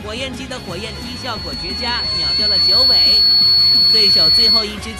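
At 0.51 s a loudspeaker feedback squeal begins. A microphone is picking up the loudspeaker it drives. At 4.4 kHz the loop gain rises above one, so that frequency feeds on itself. It starts as a faint pure tone. Over roughly two seconds it swells into a piercing squeal. It then sits around 15 dB above the rest of the sound. The squeal stops at 4.76 s, as if the loop were broken.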